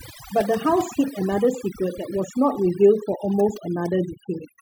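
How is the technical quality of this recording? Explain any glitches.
The recording has a clear technical problem: overdone noise removal, present for the whole length of the speech. A noise reducer set far too aggressively has pushed individual frequency bands down or out whenever they sat close to its noise estimate, taking the quieter parts of the voice along with the noise. The background drops and breaks up into twinkling specks. On a spectrogram, the gaps show as dark, empty regions scattered with isolated bright flecks.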